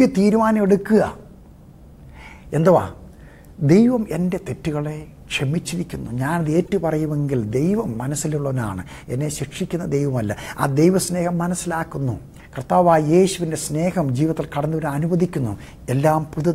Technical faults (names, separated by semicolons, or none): damaged data in a compressed stream